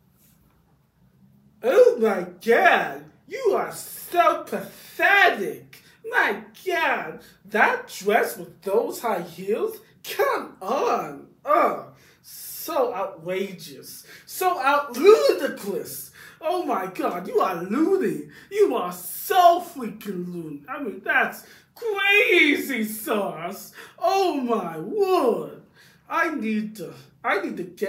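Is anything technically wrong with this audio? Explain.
No, nothing technically wrong can be heard in this audio. No working path is listed to describe further, so there is no fault to explain.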